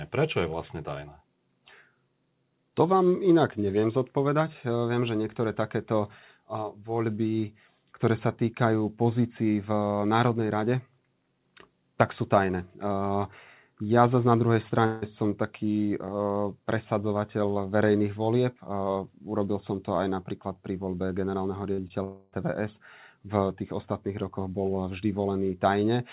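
A speech recording carried over a narrowband call path that fits G.711 mu-law, with nothing above 4 kHz. From 14.86 to 15.04 s the sound is stretched into a fading buzz with no true silence, and again from 22.04 to 22.34 s. These are likely long network dropouts, where the receiver extended the last audio over roughly 0.16 s and 0.28 s of missing stream. Just before the second one, at 21.74 s and 21.88 s, brief smears or wobbles come from short concealed packet loss, where about 40 ms and 20 ms of audio were synthesised to cover the gaps.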